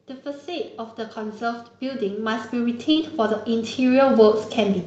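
From 0.23 s to the end, automatic gain rising is audible. The gain control judged the speech too quiet and kept lifting it, so voice and background swell together. At 2.91 to 2.98 s comes a short concealed packet loss. About 40 ms arrived too late, and the receiver extended the previous sound, leaving a brief smear before the real speech resumes. Over the 8 kHz-wide Opus call path, this sounds like a brief wobble.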